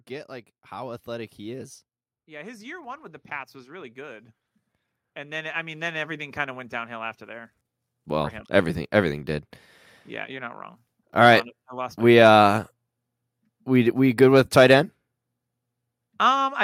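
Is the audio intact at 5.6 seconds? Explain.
No, at 5.6 seconds you're in the middle of an automatic gain rising, which runs from about 5.14 to 6.38 s. The gain control decided the input was too quiet and eased its gain up by about 5 dB, so the voice and the background swell together just before "of went downhill after".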